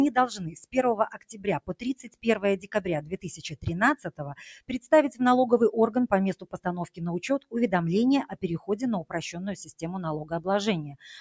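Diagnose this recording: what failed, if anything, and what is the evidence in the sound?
A speech noise suppressor in the call processing chain was left running on this non-speech material, with the band ending near 8 kHz as call audio does. It treats sustained content as noise, so the level pumps with a swing of around 10 dB.

The suppressor cut sound at 1.11–2.27, 2.58–2.81, 3.02–3.26, 3.96–4.20, 4.60–4.89, 6.35–6.66 and 8.26–8.41 s. Drops reach about 18 dB, with about 17 dB at 3.02 s and about 12 dB at 4.60 s. Held portions and decays sink while onsets pass.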